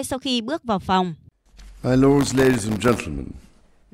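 From 2.17 s to 2.98 s the speech is overlaid with processor overload crackle. The processing could not keep up with its very short buffers, around 0.7 ms each, and missed on the order of a hundred deadlines in that span. Each miss drops in a tiny slice of silence with abrupt edges, so the signal is repeatedly chopped into fragments. Heard together, these gaps form a gritty, tearing crackle riding on the speech, which clears once the load eases at 2.98 s.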